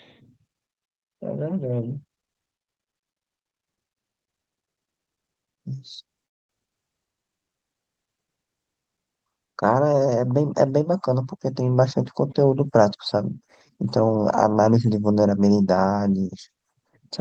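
At 6.25 s the speech stops and a gap of about 0.24 s opens until 6.52 s, nearly all of it silent. This is a call audio freeze, likely caused by packets arriving late and the jitter buffer running empty. Playback then resumes where it stopped, with nothing lost.

At 6.67 s, running to 6.71 s, comes a skip ahead. About a tenth of a second of speech was dropped, and the two sides are joined with only a 5 ms bridge. It is heard as an abrupt jump forward.

From 7.05 s to 7.92 s a jitter buffer slow-down stretches the speech to 87% speed. Repeated pitch periods add 118 ms while the pitch stays the same, so sounds are drawn out as the buffer rebuilds its reserve.

Between 12.76 s and 14.16 s the opposite happens in a jitter buffer speed-up. Roughly 100 ms of short pitch-period pieces are cut out, and the speech runs at 108% speed with unchanged pitch, sounding somewhat hurried.

Throughout, the Opus call path limits the audio band to about 8 kHz.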